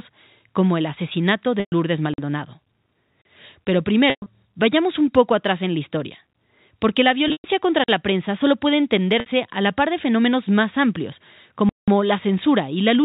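Packet loss with pitch repetition first appears at 1.60 to 1.72 s, just after "como el asesinato": about 120 ms of audio went missing, and the receiver bridged it by looping the last pitch period, giving a brief held, buzzy tone that fades before the sound resumes.

Blocks of digital silence follow at 2.14 to 2.18 s (46 ms) and 3.22 to 3.25 s (35 ms). The audio cut out with no fade, leaving each as a short hole. The 46 ms length fits a 2048-sample buffer going unfilled.

The same packet-loss concealment returns at 4.10 to 4.26 s, right before "vayamos un poco atrás", and at 7.28 to 7.44 s. Each time, about 140 ms is lost in scattered pieces over 160 ms, with a longest run of 120 ms, so the repeated pitch fades toward silence before a short cross-fade back.

Another 46 ms silent block at 7.84 to 7.88 s cuts out and back in.

At 9.20 to 9.26 s, a shorter 60 ms loss yields only a slightly stretched, buzzy hold.

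The longest block of digital silence comes at 11.69 to 11.88 s, after "de fenómenos más amplios". It is a 186 ms hole that cuts out and back with no fade, which fits an 8192-sample buffer.

Throughout, the G.711 mu-law telephone coding limits the band to below 4 kHz.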